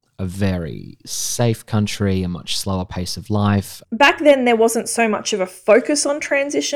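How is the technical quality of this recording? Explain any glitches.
No technical faults are audible in the recording, so there are no glitches to explain.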